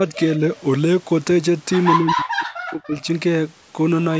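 A speech recording on a call path, whose microphone processing passes nothing above 8 kHz. The echo canceller likely judged both sides to be talking at once and turned the talker down, which is speech suppressed in double talk: slight dips of a few dB from 0.00 to 0.15 s and from 0.38 to 0.42 s, then from 1.95 to 3.08 s a severe cut of around 40 dB that mutes about a second of the voice in pieces. Between 0.57 and 0.61 s, likely echo leak lets a very faint copy of the voice back through, delayed 131 ms.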